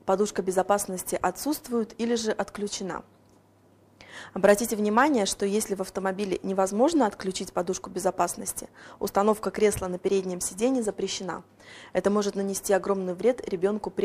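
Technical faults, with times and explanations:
No technical faults, with times and explanations, to report for this clip.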